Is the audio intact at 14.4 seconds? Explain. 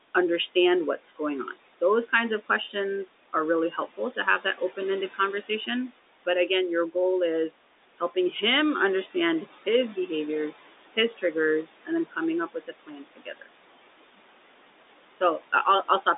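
No. Noise suppressor artifacts run through the whole clip, including 14.4 s. The room noise is cut by about 18 dB between phrases and returns under speech.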